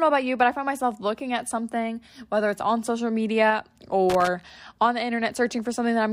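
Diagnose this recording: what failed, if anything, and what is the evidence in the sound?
An irregular burst of crackle and scratching breaks up the speech from 4.10 to 4.30 s, about 0.2 s long. This is loose connector crackle in the analogue wiring: a worn or dirty contact making and breaking as it shifts, chopping the signal.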